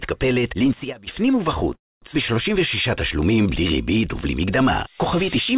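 Right at 0.63 s a loudspeaker feedback squeal kicks in: a single 5 kHz tone that swells up over roughly a third of a second and sits about 5 dB above the rest of the sound before it stops at 1.15 s. The mic was hearing its own loudspeaker, and at 5 kHz the loop had more than unity gain, so that one frequency just kept feeding itself until it was cut off.

Then from 1.74 s to 2.04 s there's a call audio freeze. The sound stalls, there's a brief tail of the last bit, and then it drops to near silence for about 230 ms. The whole hold lasts 277 ms. When it picks up again it continues right where it left off, so nothing's actually lost. Everything after that point just runs 277 ms late. That pattern is most likely the jitter buffer running dry while packets were stuck in transit, with the receiver padding the gap until they arrived.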